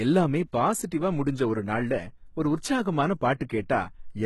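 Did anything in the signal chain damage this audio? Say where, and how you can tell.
Yes, at the codec stage, across the whole speech clip. The treble sounds bright but not real: s sounds come out gritty and lispy, with a metallic sheen, and nothing at all survives above 11.8 kHz. That points to likely HE-AAC compression at a low bitrate, fitting roughly 16 kbps. Only the lower band is coded, and the top is patched in by copying lower bands upward. On a spectrogram, the upper region shows repeated, blocky copies of lower harmonics that don't line up at the crossover, with a hard ceiling at 11.8 kHz.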